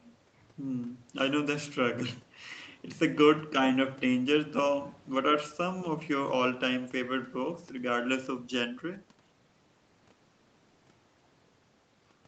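No technical faults can be heard in this speech.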